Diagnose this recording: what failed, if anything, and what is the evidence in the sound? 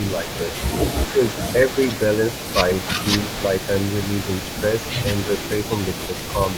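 Call processing is where this goes wrong. Through the whole clip, 0.0 to 6.6 s, there's a faint second copy of the speech trailing the original by 285 ms, sitting roughly 15 dB under it. That's an echo leak, likely from the far end running on a loudspeaker with an echo canceller that isn't fully converged, so part of what its mic picks up gets returned to us as a delayed ghost.

The same stage causes a brief dip between 1.0 and 1.2 s. The speech drops by something like 10 dB for a bit over a tenth of a second in total, then recovers. That pattern fits speech suppressed in double talk. Both ends were active at once, and the canceller, unable to tell the talker apart from the returning echo, likely attenuated everything for that moment rather than risk letting echo through.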